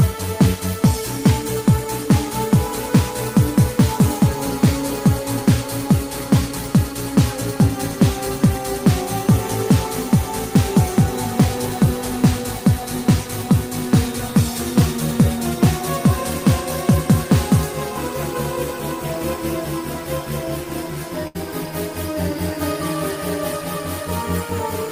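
Near the end there's a burst of packet loss, starting at about 21.27 s and running to about 21.37 s. A short run of packets never made it in time, so the receiver just kept stretching the last bit of audio for around 72 ms, letting it fade as the gap went on. When the stream picks back up, roughly 80 ms of the original sound is simply gone, so it jumps ahead slightly.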